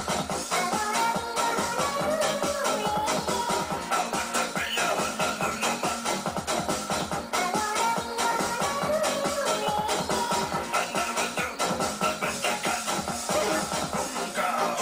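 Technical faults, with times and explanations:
The signal holds steady throughout, with no audible technical faults at any point in the audio.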